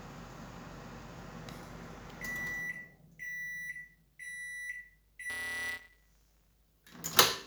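From 5.29 to 6.55 s a steady robotic buzz at 172 Hz rides on the sound. This is buffer tearing: writer and hardware reader have slipped, so a small slice of each period replays audio about 20 ms old, and the buzz rate fits a 256-sample buffer.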